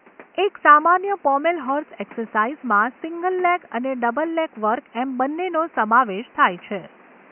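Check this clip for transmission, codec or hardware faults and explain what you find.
Nothing stood out on listening to this speech recording, and the faint room noise, sitting about 30 dB below the voice, belongs to the space where it was recorded.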